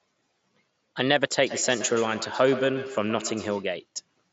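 Feedback echo between two devices runs from 1.46 to 3.74 s in this speech clip, with each sound returning roughly every 150 ms, thinner and more ringing, peaking about 11 dB below the speech. A second device in the room replays the call audio into a nearby microphone, and that device's echo canceller cannot remove sound it did not play. The audio stops at 7.7 kHz, which fits the wideband Bluetooth mSBC headset codec.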